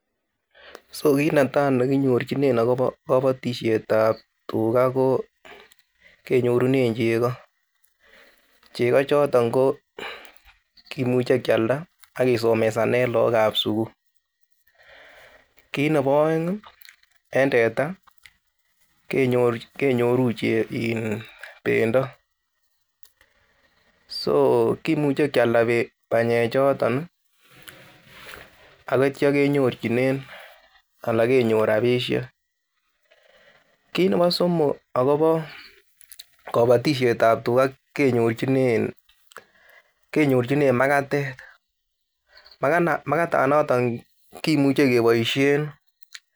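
No technical faults are audible anywhere in the recording.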